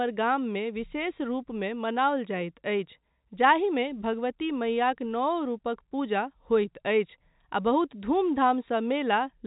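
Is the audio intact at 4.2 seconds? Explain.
Yes, the audio is intact at 4.2 seconds: the speech carries only the narrow band of G.711 telephone coding, with nothing above about 3.8 kHz.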